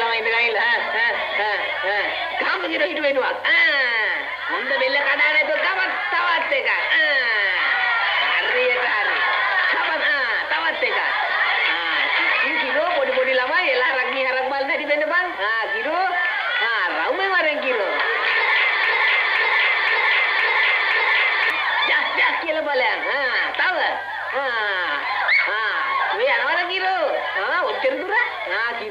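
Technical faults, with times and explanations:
18.84–21.50 s, broken-record loop: a fragment of about 0.52 s plays five times back to back with no variation, so the audio stutters in a rigid, mechanical rhythm for about 2.7 s before normal playback resumes. The exact repetition most likely comes from the player, encoder or stream stalling and resending the last fragment still held in its buffer. Whatever audio belonged to that stretch never arrives and is lost.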